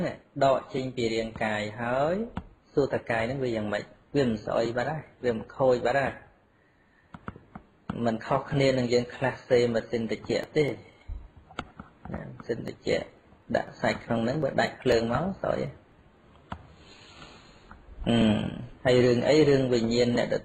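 From 10.19 to 16.17 s, periodic USB or driver dropouts skip about a millisecond of audio every 0.249 s, leaving regular ticks during signal.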